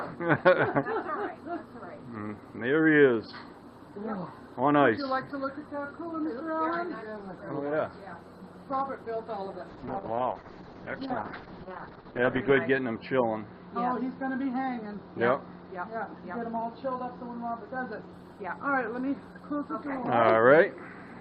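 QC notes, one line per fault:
9.69–18.19 s, call bitrate drop: the sound turns rough and muffled, with the top end cut from 20 kHz to 8 kHz and worst for about 2.9 s. A falling bandwidth estimate forced coarser coding, which fits a drop from 32 to 8 kbps.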